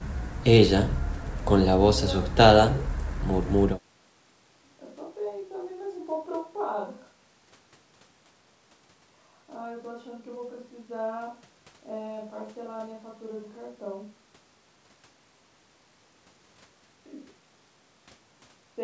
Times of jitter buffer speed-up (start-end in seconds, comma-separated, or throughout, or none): none